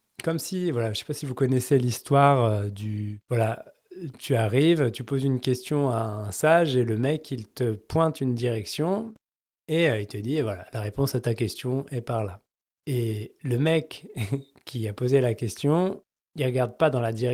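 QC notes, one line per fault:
No faults are heard anywhere in the clip. The Opus voice compression is audible only as light coding at a level that fits about 24 kbps, with the band kept full-width and the upper range carried in hybrid mode.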